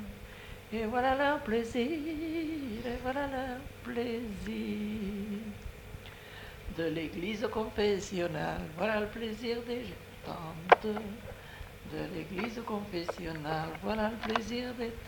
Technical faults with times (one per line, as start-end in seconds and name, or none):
none